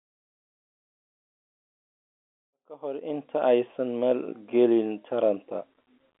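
No technical faults are audible.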